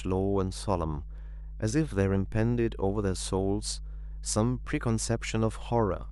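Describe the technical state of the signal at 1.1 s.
At 1.1 s the speech carries mains hum, present throughout the clip: power-line current leaking in through a ground loop or nearby transformer adds a steady 50 Hz drone, fairly strong at roughly 10 dB below the speech. A spectrogram shows a constant horizontal line at 50 Hz with some low harmonics, and the waveform shows a slow, regular ripple even in pauses.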